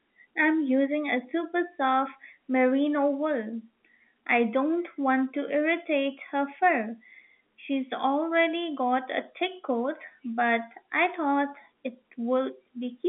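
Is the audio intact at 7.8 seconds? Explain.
Yes, at 7.8 seconds the speech is intact, with only the narrow telephone band of the G.711 line audible and no fault there.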